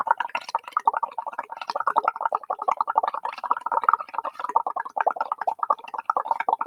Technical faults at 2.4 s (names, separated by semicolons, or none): noise suppressor applied to music or sounds